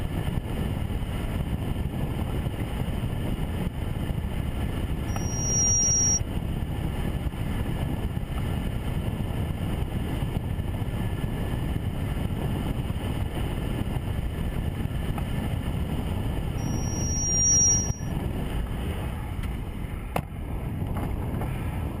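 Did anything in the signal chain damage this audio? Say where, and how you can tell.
Yes: loudspeaker feedback squeal at the acoustic/analogue stage, 5.08–6.20 s and 16.58–18.12 s. A 5.7 kHz tone swells in about half a second, then about a second. On a spectrogram it is a rising horizontal line, louder than the sound.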